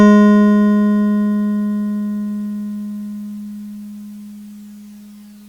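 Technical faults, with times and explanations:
Nothing wrong turns up anywhere in this bit of music; there's simply no technical fault to point to.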